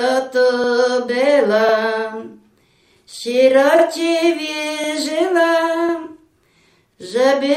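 Overlapping chunks at 1.69, 3.79, 4.84 and 5.89 s: the audio was processed in 1-second chunks, each starting 50 ms before the previous one ended. That 50 ms slice of sound plays twice at each join, heard as a short click-like stutter.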